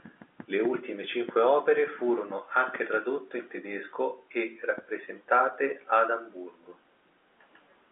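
The speech carries no audible technical faults.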